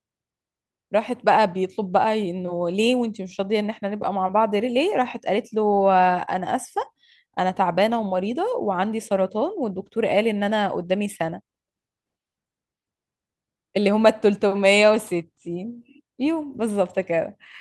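No technical faults can be heard anywhere in this speech recording. There is nothing in the audio that calls for a time stamp or a description of what went wrong.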